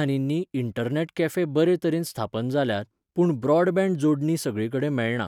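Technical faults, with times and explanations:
No technical faults, with times or otherwise, can be heard in the speech.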